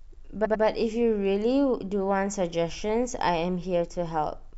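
A speech clip with repeated frames from 0.44 to 0.63 s. A 93 ms block plays twice more, stuttering and adding 186 ms, consistent with duplicated compressed frames.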